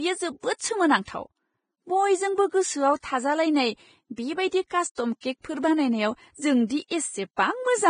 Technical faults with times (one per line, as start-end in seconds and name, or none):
0.00-7.89 Vorbis compression
1.05-1.08 pre-echo
4.95-4.97 pre-echo